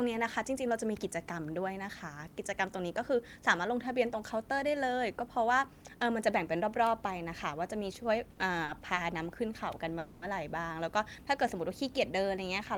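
At 8.33 s and again at 8.65 s a packet arrived late, so the jitter buffer had nothing ready to play. Each time the receiver stretched the last bit of speech by about 30 ms until the packet turned up, then carried on from the same point. These are short stalls from a late packet. Nothing is lost, but the sound briefly hangs with a faint buzz or dip, and the second stall drags on slightly until about 8.83 s.

From 9.99 s to 10.23 s there is a call audio freeze, likely caused by packets being held up in transit long enough to drain the jitter buffer. The receiver filled the wait of about 230 ms by continuing the last sound as a fading buzz or hiss that never drops to full silence. The speech then resumes exactly where it stopped, so nothing is missing, but it now runs about 230 ms later than before.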